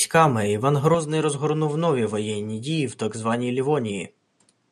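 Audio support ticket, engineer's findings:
Input switched to a poorer device, likely. From 0.94 s to end: sudden dulling, top cut near 10.2 kHz, level down about 5 dB, new noise floor about 45 dB below speech. No gap at switch. Narrower capture chain replacing original.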